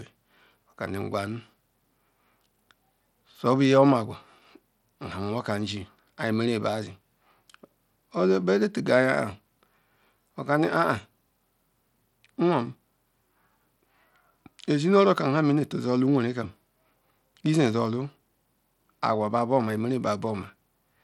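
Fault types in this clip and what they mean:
Bluetooth SBC compression: the speech carries plainly audible grit and a coarse, roughened texture, with nothing above 19.5 kHz. This is likely SBC coding with too few bits, coarsely quantising its wide sub-bands, which fits a bitrate around 96 kbps.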